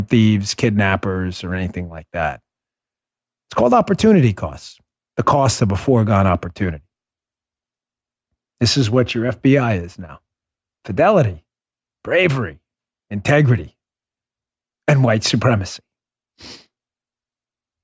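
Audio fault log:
No faults were heard anywhere in the speech recording.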